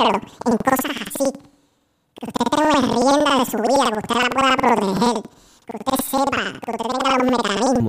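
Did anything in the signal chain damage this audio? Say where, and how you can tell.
Yes: planar audio read as interleaved, at sample-format conversion. Throughout, speech sounds an octave high with 10.8 Hz flutter from 92.9 ms blocks, yet pace stays normal, unlike a speed-up.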